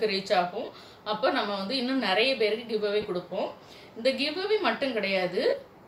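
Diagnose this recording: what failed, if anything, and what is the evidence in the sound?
Lost LE Audio frames, a failure on the Bluetooth link: brief noisy smears at 0.65–0.68 s, 3.02–3.05 s and 5.49–5.53 s, lasting 30, 22.5 and 37.5 ms. Each fits a few 7.5 ms frames. The LC3 decoder filled each gap by reusing the previous spectrum with random signs. A spectrogram therefore shows a blurred band where the waveform loses its structure but doesn't drop to silence.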